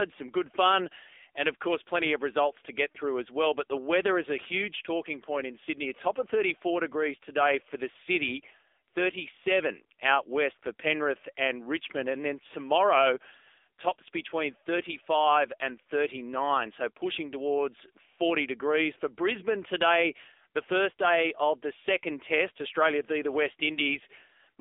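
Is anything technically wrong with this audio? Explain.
Yes. Throughout the speech, AMR narrowband mobile codec damage: band limited to 300 Hz to 3.6 kHz, nothing above 3.7 kHz, with a buzzy, synthetic vocal-tract resynthesis suggesting roughly 8 kbps. A simple low-pass would lack that artificial buzz.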